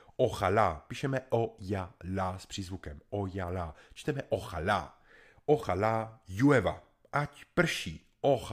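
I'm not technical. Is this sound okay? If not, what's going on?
No. From about 0.12 s to 8.46 s there is a faint, regular ticking under the speech, about ten ticks a second, close to a hundred in all, which can blur into a soft rattle. These are clock slip clicks. The likely cause is two pieces of equipment each keeping their own time, drifting apart by a couple of hundred parts per million, so a single sample gets dropped or repeated at each tick.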